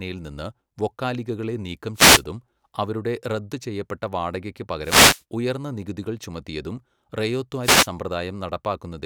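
At 1.94 to 2.23 s, right after "നിന്ന് വൊക്കാലിഗകളെ നീക്കം", a wireless microphone noise hit cuts across the speech as a brief swish of static. It returns at 4.81 to 5.23 s, following "അവരുടെ റദ്ദ് ചെയ്യപ്പെട്ട വാടകയ്ക്ക്", and again at 7.62 to 7.89 s. Each burst lasts roughly a quarter to four tenths of a second. The FM radio link is fading as reflected signals cancel at the receiver, letting its noise floor surge up over the voice.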